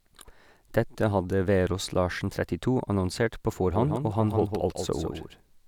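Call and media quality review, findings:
Doubled audio track, 3.73 s to end: speech repeated as a full-band copy around 150 ms behind, about 5 dB quieter, no decay or room colour, abrupt onset. Likely a second capture via a slower path, or out-of-step duplicate copies in an edit.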